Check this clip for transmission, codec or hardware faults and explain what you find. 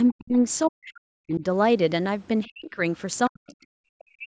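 Two kinds of fault run through this speech recording, both tied to the call's echo handling.

The speech repeatedly sinks and breaks apart: from 0.12 to 0.37 s, from 0.70 to 1.43 s, from 2.47 to 2.79 s, and from 3.28 s to the end. At its deepest the level falls by around 40 dB, enough that parts simply vanish. This is speech suppressed in double talk, likely from the echo canceller turning down the microphone while both ends spoke at once, because it could not tell this talker from the loudspeaker's echo.

Just before the second dropout, from 0.65 to 0.70 s, a brief scrap of a second voice slips in, roughly 25 dB below the main speech. That is the other side's voice leaking through: the far end plays on this device's loudspeaker and the microphone picks it up. The likely cause is that the echo canceller left a residue of it in the outgoing audio. The call's microphone processing, which leaves nothing above 8 kHz, is working normally.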